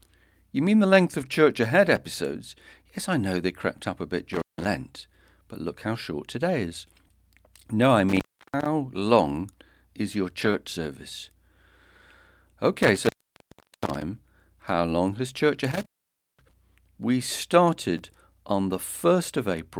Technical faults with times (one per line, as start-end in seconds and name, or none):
1.21-1.31 lost packet rebuilt from error correction
1.96 chunks out of order
4.33-4.67 intermittent contact
8.09-8.66 intermittent contact
10.41-10.55 lost packet rebuilt from error correction
12.83-14.02 intermittent contact
15.71-16.53 intermittent contact
17.53 lost packet rebuilt from error correction
17.98 chunks out of order